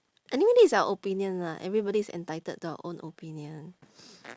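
Nothing here trips any alarm: the recording runs along without a single glitch, dropout or distortion worth pointing to.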